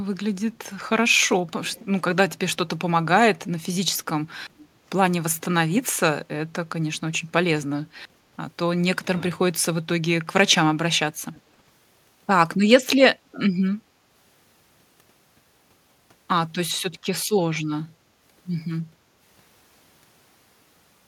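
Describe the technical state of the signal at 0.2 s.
At 0.2 s the speech signal is intact, with no audible fault at that moment.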